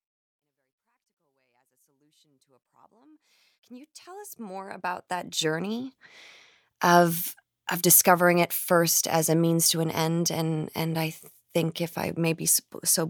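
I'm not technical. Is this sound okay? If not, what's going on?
Yes, this speech recording has no technical faults, and the gentle rise in volume over roughly the first 6 seconds is a normal, deliberate fade-in rather than a problem.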